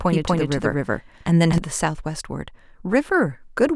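A doubled audio track runs from the very start to 1.58 s: a second full-band copy of the speech trails roughly 200 ms behind at about equal loudness, dry with no decay, then cuts off abruptly, likely from a slower second capture path.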